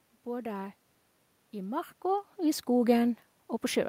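There are no technical faults to describe in time order.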